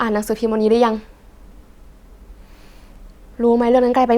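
No technical faults can be heard at any point in the speech.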